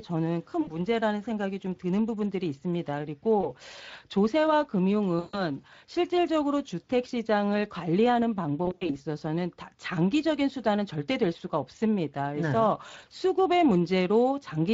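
A speech recording carries Speex codec damage throughout. The texture is plainly hoarse and noisy, as the CELP coder has too few bits to rebuild the excitation faithfully, which fits a bitrate around 20 kbps. On a spectrogram the voiced harmonics look smeared and grainy, with noise filling the gaps between them instead of clean striations.

On top of this, there are four stretches of VoIP packet loss concealed by the speech codec, at 0.61 to 0.75 s, 3.41 to 3.49 s, 5.19 to 5.41 s and 8.65 to 8.99 s. In each one the decoder keeps repeating its last pitch and filter with falling gain, so the audio stretches into a buzzy or coloured hum that fades before recovering. The gaps cover about 60 ms, 20 ms and 140 ms in the first three, which fits lost 20 ms frames. The last gap also totals 140 ms, but it is scattered across about 240 ms, with its longest run at 80 ms. On a waveform each of these shows as a decaying, overly regular envelope. 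On a spectrogram the harmonic lines freeze flat and fade, then stay weak for a short while after normal packets resume.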